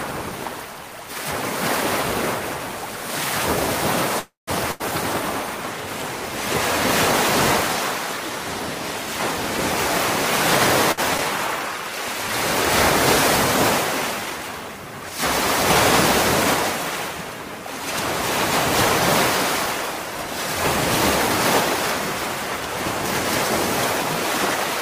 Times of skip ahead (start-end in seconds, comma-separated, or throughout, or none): 11.18-11.21